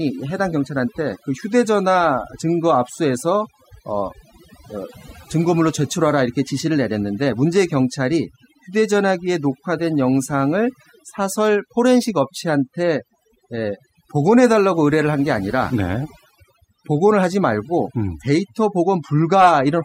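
A speech recording with overdone noise removal throughout. Noise reduction set too aggressively mutes frequency bands near the noise floor. The background drops and breaks up into twinkling specks.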